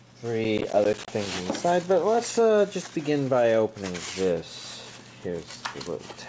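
From 0.44 to 1.08 s the processor falls behind and misses about fifteen buffer deadlines over that stretch, which fits roughly 10 ms buffers. Each miss leaves a hard-edged sliver of silence, so the sound tears into a gritty processor overload crackle until the load passes. Nothing above 8 kHz comes through, consistent with a G.722 call path.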